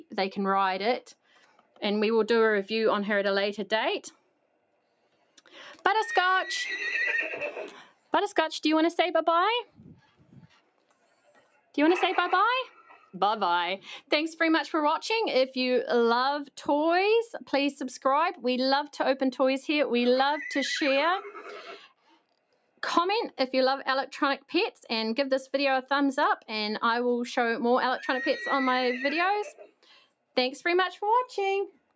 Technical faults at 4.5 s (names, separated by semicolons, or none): sound cut by the noise suppressor